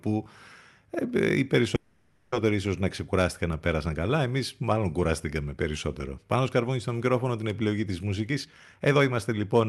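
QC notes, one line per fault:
1.75–2.35 s, call audio freeze: Right after "ε οι" the sound stalls for about 0.57 s and is filled by a smeared continuation of the last sound rather than silence. The likely cause is packets held up in transit, so the jitter buffer ran dry and the receiver stretched what it had. Unlike a dropout, nothing is lost: the speech picks up intact at "ίσω να ξεκουράστηκαν να", just about 0.57 s later than it should.
8.30–9.66 s, jitter buffer speed-up: After "μικρόφωνο την επιλογή τη" the speech runs at roughly 138% of its normal rate while keeping the same pitch, so it sounds hurried rather than chipmunk-like. The receiver was draining an overfull buffer by cutting many pitch-period-sized slices, roughly half a second in all. That constant pitch separates it from a resampling or playback-rate error.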